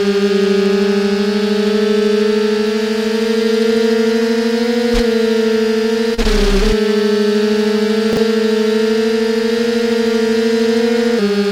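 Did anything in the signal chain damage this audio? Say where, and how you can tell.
Yes. The damage sits in the network and receive-buffer side of the chain, with one further fault in how the audio was assembled.

At 6.14 to 6.19 s there is a short stall from a late packet. A packet arrived late, the jitter buffer ran dry, and the receiver held the last sound for about 34 ms until it turned up. Nothing is lost, but everything after plays 34 ms later. On a spectrogram the harmonics run flat and unchanging for that span, and the waveform shows a repeated, slightly buzzy cycle.

Just after, at 6.23 to 6.26 s, comes a short concealed packet loss. About 20 ms of audio never reached the decoder, and concealment bridged roughly 17 ms by extending the preceding sound before blending back. It is heard as a brief smear or wobble. A spectrogram shows a blurred, smoothed patch where fine detail drops out.

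At 8.13 to 8.17 s there are chunks out of order. A 10 ms block arrived or was written three chunks late, so it plays after material that should follow it. Nothing is missing, but there is a jumbled moment with three hard joins. In the waveform these show as abrupt discontinuities. On the spectrogram they appear as thin vertical broadband lines with mismatched content on either side.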